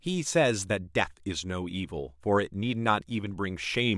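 No technical faults can be heard anywhere in the recording, so there is nothing to place on the timeline.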